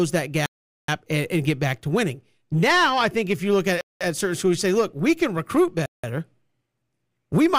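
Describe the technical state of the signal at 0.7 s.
At 0.7 s the speech has dropped out completely: a Bluetooth stall running from 0.46 to 0.88 s, about 0.42 s of dead silence. It's likely interference delayed packets, the headphones' buffer emptied, and playback resumed on "and and get back".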